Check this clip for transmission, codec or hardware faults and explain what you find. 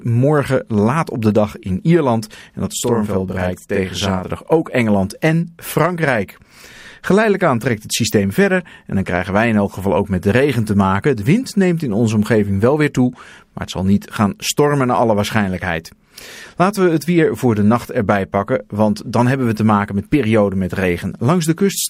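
One fault. From 2.73 to 4.28 s, a channel delay (doubling): one channel ran about 43 ms late, consistent with a 2048-sample buffer, and the mono sum adds an equal-level slap echo.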